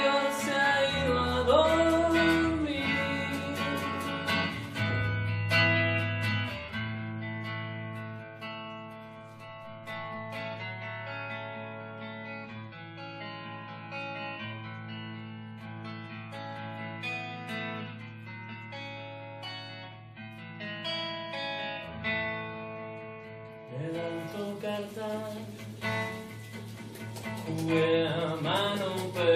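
No dropouts, clicks, distortion, level jumps, or other technical faults can be heard anywhere in the clip.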